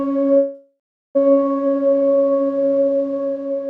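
At 0.37 s a call audio freeze begins. The last sound stretches into a fading buzz, then about 0.37 s of silence. Audio resumes at 1.17 s, nothing lost, likely from delayed packets.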